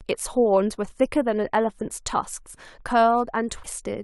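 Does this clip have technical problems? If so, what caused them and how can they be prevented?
Yes. At 3.62 to 3.66 s the speech jumps ahead. This is likely a broken MP3 bit reservoir: frames were lost, so the next frame read borrowed bytes from the wrong data. Prevent it by cutting MP3 streams only at clean frame boundaries with reservoir-aware tools.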